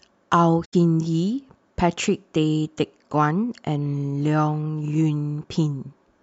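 From 0.64 to 0.74 s, AAC frame loss with muting leaves a gap of about 85 ms in the speech, consistent with four lost frames zeroed by the decoder. Its faded edges, not a hard cut, distinguish it from a plain dropout.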